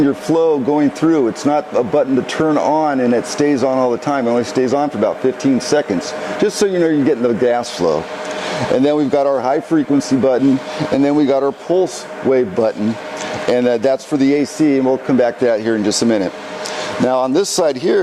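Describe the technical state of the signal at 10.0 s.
At 10.0 s the signal is intact, with no technical fault audible at that moment.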